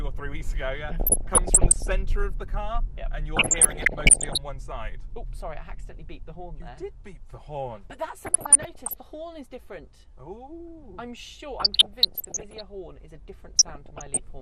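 Across the whole clip the sound is dull and granular, with a gurgling edge, and this MP2 compression is likely the cause; the damage level fits a rate around 80 kbps. With too few bits, upper sub-bands drop out entirely and the remaining ones are coarsely quantised. A spectrogram would show a hard ceiling on the high frequencies with blocky patches flickering on and off in time. Layered on top is DAB burbling at 0.89–1.87 s, 3.37–4.38 s, 8.22–8.95 s, 11.60–12.61 s and 13.59–14.19 s: short blips of noise and sub-bands jumping in level where bit errors slipped past the error correction and corrupted samples and scale factors. The 3.37 s burst is the heaviest, pointing to a higher error rate there. On a spectrogram these show as isolated bands jumping brightly in level for single short frames, scattered like speckle across each burst, with matching spiky, uneven bumps in the waveform envelope.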